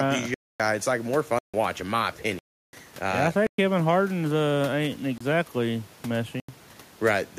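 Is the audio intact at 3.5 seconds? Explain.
No. Right after "yeah I uh", a block of digital silence runs from 3.47 to 3.58 s, a gap of about 117 ms. The sound cuts out and returns without any fade, and the speech has a short, hard hole.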